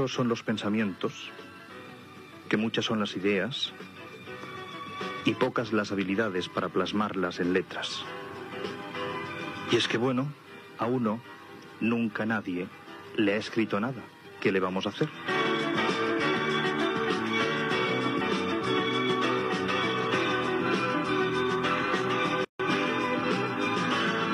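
About 22 seconds into the audio there is a gap at a join of encoded pieces. The sound drops out from 22.45 to 22.60 s, a silence of about 148 ms. Its edges are smeared by the codec. Afterwards the sound resumes exactly where it stopped. The cause is two separately encoded pieces joined without trimming. The encoder's start-up delay and the padding on the last frame were both left in, creating the hole.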